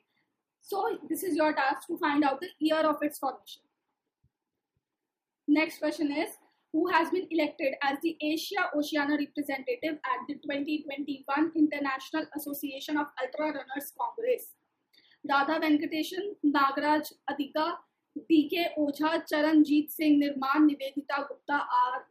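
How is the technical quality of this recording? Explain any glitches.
The quality is compromised by two recurring faults: three stretches of Bluetooth SBC bit pool drop and four isolated clicks.

Bluetooth SBC bit pool drop, 3.26 to 5.00 s, 11.98 to 15.74 s and 18.82 to 21.73 s: the link cut the encoder's bit budget, consistent with a halving from bit pool 28 to 14 (around 108 kbps). The upper sub-bands lose their bits and the rest are quantised coarsely, so the treble dulls and gritty noise rises until quality returns.

Dropped samples at 6.89, 10.59, 17.31 and 21.13 s: the stream most likely lost a handful of samples, well under a millisecond each. The waveform jumps abruptly to a later value, producing a single sharp click with no audible gap. The one at 21.13 s falls inside the last codec dip.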